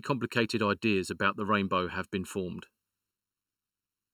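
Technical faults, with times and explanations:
Throughout, channel delay (comb filtering): one channel arrives late by a little under a millisecond, roughly 0.7 ms, and mixing the two to mono cancels their shared content at evenly spaced frequencies, the first near 700 Hz and the next roughly 1.4 kHz above each other. The speech sounds hollow and phasey. Unlike a flanger, the notches never move, and unlike a simple low-pass, the treble is notched rather than smoothly rolled off.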